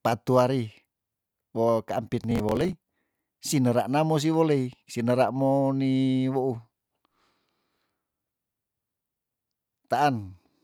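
Speech with a burst of processor overload crackle from 2.24 to 2.73 s: the processor could not finish its audio buffers in time, and about twenty short deadlines, roughly 5 ms each, were missed and skipped, leaving tiny hard-edged gaps. These sound like gritty tearing over the voice that stops once the load eases. On a waveform the stretch shows repeated abrupt breaks and jumps; on a spectrogram it appears as a cluster of thin vertical broadband stripes.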